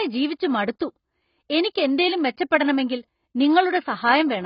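From the start to the end of the speech, everything above about 5.1 kHz is simply missing, so it comes across dull, with a watery, swirly smear on sustained sounds and sibilants. That's heavy AAC compression damage, likely from AAC-LC squeezed to a very low bitrate, something like 16 kbps. With so few bits, the encoder drops the top end entirely and codes the remaining bands coarsely, leaving gaps that give that warbling texture.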